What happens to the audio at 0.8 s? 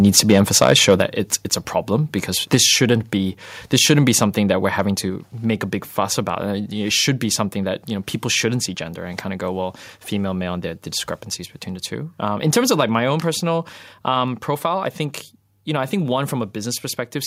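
At 0.8 s the speech is in a stretch of microphone overload running from 0.61 to 1.02 s, just before "it's it's a problem". The input level was likely set too high, driving peaks about 6 dB past the converter's ceiling, so their tops are sheared flat. Only around one percent of samples are affected, but those flattened crests add a harsh, crackling edge to the loudest syllables in that span.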